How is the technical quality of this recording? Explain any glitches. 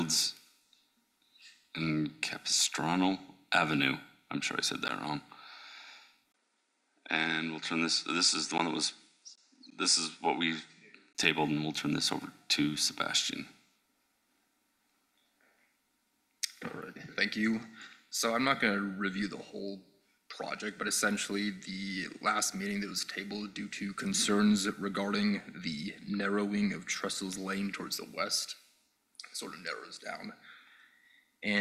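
The recording has one glitch. An input switched to a poorer device from 6.32 to 11.15 s, likely a change to another microphone. Nothing above 10 kHz passes, so the sound turns duller, with a brief 20 ms silence at 6.32 s, a faint new noise floor, and steady level.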